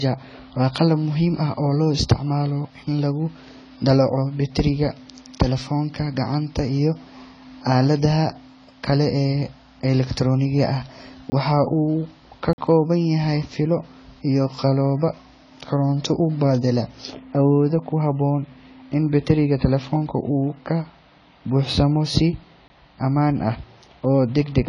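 Low-bitrate audio saved at a high bitrate affects this whole speech clip: nothing sounds above 10 kHz, and the coding artefacts likely come from an earlier low-bitrate encode that a later high-bitrate MP3 cannot restore. Blocks of digital silence occur at 11.30 s (20 ms, after "elektarooniga ah"), 12.53–12.58 s (about 48 ms, before "kooban yahay fiilo iyo") and 22.68 s (20 ms, before "ammaan ah"). At each one the sound cuts out abruptly and back.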